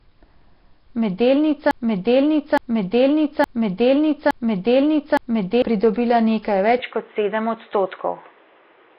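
Speech runs through heavy Nellymoser compression throughout, likely from a Flash-era encode, and the sound fits about 22 kbps: rough, hissy and smeared, with empty bands filled by noise. A spectrogram shows a hard ceiling at 5.3 kHz and grainy, blotchy patches where bands were replaced with noise. From 1.71 s to 5.62 s a broken-record loop takes over: a fragment of about 0.87 s repeats five times back to back, and the audio that should have played there is gone. This is likely a stalled player, encoder or stream resending its last buffer. The waveform shows identical blocks tiling that span, and the spectrogram shows the same pattern stamped repeatedly. At 6.79 s the input switched to a poorer device, likely another microphone or a headset call profile, and stays that way to the end. There is no gap and no clear level jump, but the sound turns duller and a new noise floor appears well below the speech. 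On a spectrogram the ceiling drops from 5.3 kHz to 3.8 kHz at that moment, and a steady band of noise begins beneath the speech.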